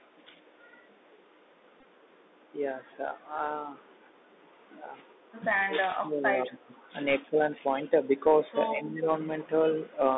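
Bluetooth CVSD headset codec damage runs through the whole of this speech recording, from start to finish. The audio sits in a narrow line band of about 250 Hz to 3.7 kHz. Each sample is a single up-or-down bit at 64 kHz with an adapting step, so fast, loud high content outruns the step and distorts. Sibilants come out scratchy, and a granular hiss sits under the talker throughout. An echo leak appears at 0.68 to 0.72 s and again at 6.44 to 6.49 s. Each time a copy of the sound returns 192 ms late, very faint the first time and more noticeable the second. The likely cause is a far-end loudspeaker whose echo canceller let part of its microphone pickup through and sent it back. A Bluetooth headset packet repeated fault hits at 1.80 to 1.86 s. About 37.5 ms of audio is lost over a 45 ms stretch, which fits roughly ten dropped 3.75 ms packets. The longest run is about 15 ms, and there the chip re-decodes the last good packet and produces a brief buzz near 267 Hz. 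Speech suppressed in double talk shows up as dips at 4.53 to 4.58 s (about 10 dB), 5.61 to 6.79 s (the deepest, about 25 dB, lasting around a second), 7.22 to 7.49 s (about 15 dB), 7.82 to 7.92 s (about 5 dB) and 8.74 to 9.08 s (about 10 dB). The level drops and thins out in pieces. This is likely an echo canceller that could not separate the talker from simultaneous far-end sound and turned both down.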